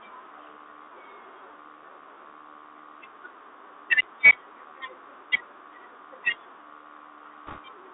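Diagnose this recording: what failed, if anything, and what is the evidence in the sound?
At the codec stage, the Bluetooth CVSD headset codec's adaptive one-bit delta modulation confines the speech to roughly 300 Hz to 3.7 kHz, with scratchy sibilants and granular hiss throughout.

On the Bluetooth voice link, bit errors at around one or two percent corrupt the CVSD stream from 7.47 to 7.60 s, producing a brief rushing crackle rather than loud clicks.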